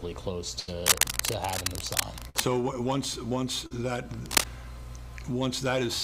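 At 0.59 to 0.69 s there is a burst of packet loss: roughly 80 ms never arrived, and the receiver held the last sound for about 80 ms, fading it as it went, before jumping ahead. It sounds like a brief held buzz or hiss followed by a skip. On a spectrogram the harmonics or noise freeze into flat horizontal bands that dim, then the pattern resumes abruptly; the waveform shows a repeating, decaying cycle.

From 0.86 to 2.47 s comes cable scratch noise, likely from a worn lead or connector being moved. Its rapidly changing contact adds ragged scratching about as loud as the sound itself. A second burst of packet loss falls within this stretch at 2.29 to 2.37 s, with about 50 ms of filler covering roughly 40 ms of lost audio, and again gives a short held buzz or hiss and a skip. The scratch returns at 4.26 to 4.46 s, this time somewhat louder than the sound. A spectrogram shows dense, broadband vertical speckles scattered irregularly, and the waveform carries jagged spikes riding on the signal.

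At 3.66 to 3.72 s a short concealed packet loss replaces about 40 ms with extrapolated audio that blends back in. It is heard as a quick smear or wobble. On a spectrogram it appears as a slightly blurred, smoothed sliver where fine detail briefly disappears, and the waveform shows no gap.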